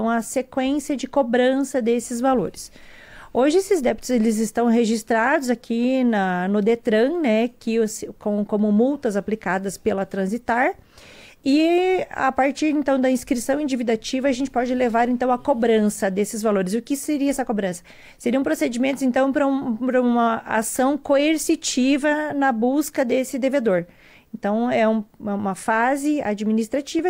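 There are no technical faults to describe at any point in the audio.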